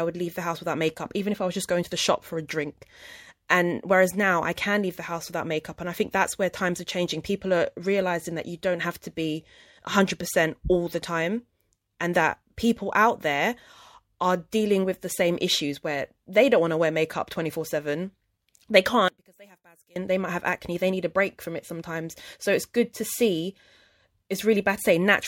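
From 19.08 to 19.96 s the speech collapses by about 28 dB into a faint residue, likely one channel inverted so the centred voice cancels in mono. Unlike a dropout, a faint copy remains rather than silence.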